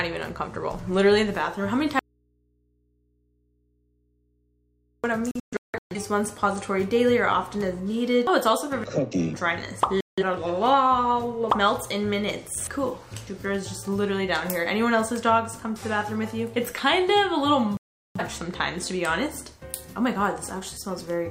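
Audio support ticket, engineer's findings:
Audio dropout to a faint residue, 1.99–5.04 s. Sound cuts abruptly for about 3 s. Gap holds only mains hum, far below normal level. Likely a broken input connection upstream with the following stage still live. Sound resumes suddenly.

Digital broadcast dropout, 5.31–5.96 s, 10.01–10.23 s and 17.77–18.21 s. Receiver mutes to silence on lost or failed frames. First event is several short holes, longest 0.17 s. Others lose 0.17 s and 0.38 s. Programme content in the gaps is lost.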